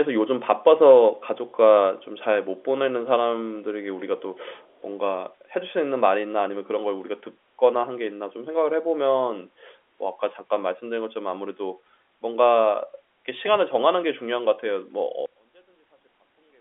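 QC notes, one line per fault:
4.57–4.82 s, echo leak: a very faint delayed copy of the speech comes back about 365 ms behind the original, just a short scrap. Most likely the far end is on a loudspeaker and its echo canceller let a bit slip through.
15.26–16.61 s, one channel inverted: right at the end the speech suddenly drops by about 33 dB and goes faint. That's most likely one stereo channel flipped in polarity, so the shared centre content cancels when summed to mono.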